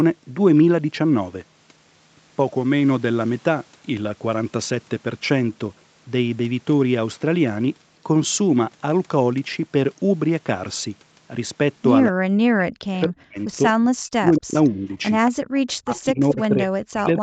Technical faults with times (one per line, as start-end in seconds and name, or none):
12.11-14.98 speech suppressed in double talk
14.35-14.39 echo leak
14.64-14.69 echo leak
15.26-15.31 echo leak
15.43-15.51 background gated by the echo canceller
15.67-15.74 echo leak
15.79-17.22 speech suppressed in double talk